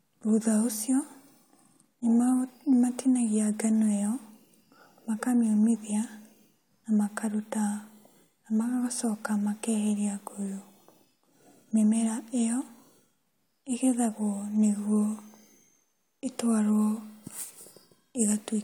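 A recording of speech, with no technical fault at any point. There is nothing to give a time or a cause for.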